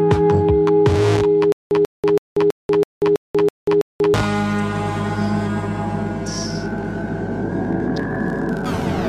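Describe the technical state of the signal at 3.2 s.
At 3.2 s the signal is in a stutter with silent gaps (1.52–4.14 s): a 139 ms fragment repeats every 327 ms with 188 ms of digital silence, likely a stalled stream retrying.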